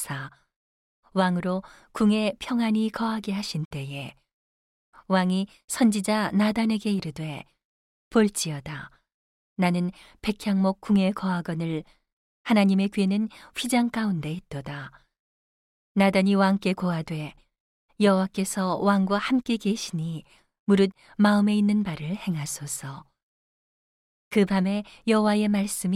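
A speech recording with nothing technically wrong to point to.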